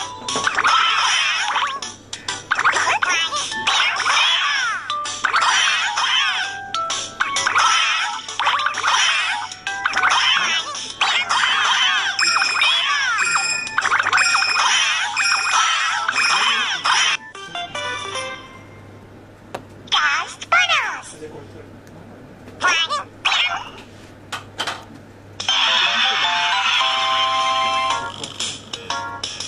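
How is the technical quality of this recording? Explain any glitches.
The technical quality of this recording is sound, with no glitches to explain.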